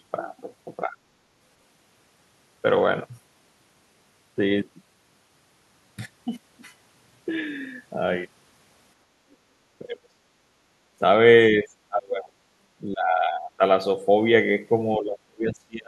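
At 0.85 to 0.96 s the speech dips by roughly 10 dB for about a tenth of a second. That's likely speech suppressed in double talk, where the echo canceller couldn't separate the talker from the loudspeaker echo and pulled both down.

From 9.06 to 9.24 s the room background drops by about 6 dB. That's background gated by the echo canceller, which clamped the mic while the far end was playing, and the background comes back once it lets go.

At 9.31 to 9.35 s there's a brief, very faint scrap of the other side's voice leaking through, around 40 dB under the speech. It's likely loudspeaker pickup the canceller didn't fully remove.

After that the double-talk suppression gets much heavier. The speech sinks deeply or breaks up at 9.79 to 10.16 s, 11.51 to 12.37 s, 12.93 to 13.62 s, and from 14.98 s right to the end, with dips of roughly 20 to 35 dB. Each again likely comes from the canceller ducking the talker while both sides were speaking.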